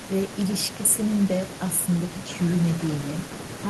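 No technical faults can be heard anywhere in the speech. Nothing in the recording points to a problem in how the audio was captured or carried.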